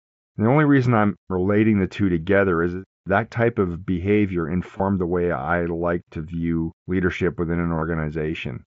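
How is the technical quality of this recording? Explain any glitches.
The recording carries the band-limited character of a wideband Bluetooth headset link, with two short glitches from concealed Bluetooth headset packet loss.

At 4.77 to 4.80 s, between "that type of behavior" and "the way I like", there is a brief glitch. At 7.76 to 7.82 s, right after "view leadership within an", a longer buzzy, held tone ends in a slight warble. Packets between headset and phone went missing, and the receiver filled each gap by repeating a matching stretch of the preceding waveform. The first gap, about 22 ms, fits a few lost frames. The second gap is about 45 ms of losses spread over 60 ms, with the longest continuous run about 30 ms, which is why it buzzes audibly.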